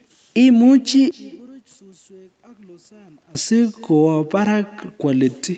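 Throughout the speech there is echo with no canceller. A loudspeaker at the far end feeds the microphone, and nothing removes it. Each phrase returns about a third of a second later. The copy is thin, about 24 dB below the speech.

From 1.11 to 3.35 s the speech nearly disappears, dropping by about 28 dB. Only a faint trace remains. This is likely one channel inverted. Summed to mono, the reversed channel cancels the centred voice. Full level returns at 3.35 s.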